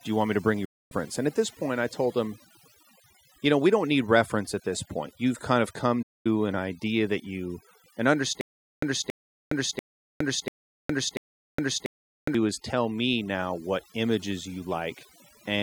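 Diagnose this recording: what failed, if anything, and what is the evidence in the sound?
Overdone noise removal runs through the whole speech clip. This is a call-processing or noise-suppression stage set far too hard. The background sits near silence, broken by twinkling specks. The suppressor is pulling individual frequency bands down or out whenever they come close to its noise estimate. Quiet parts of the voice fall under that threshold and vanish with the noise, leaving sparse, fluttering spectral fragments.

There are two digital broadcast dropouts at the reception or network stage. The first runs from 0.65 to 0.93 s and loses about 256 ms. The second runs from 6.02 to 6.26 s and loses about 224 ms. Each is a quick fade of about 8 ms into silence, followed by a clean return. The receiver muted while frames were missing or failed their checks. Those lengths fit runs of 32 ms frames. 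The programme material sent during each gap is gone.

A stutter with silent gaps occupies 8.41 to 12.35 s. The same 276 ms fragment plays, then roughly 414 ms of digital silence follows. The cycle repeats every 690 ms, five times. The even pace and exact repetition point to the playback or buffer stage. The likely cause is a stalled stream. The player replayed its last fragment on each retry, then ran empty. Audio that should have filled those seconds is lost.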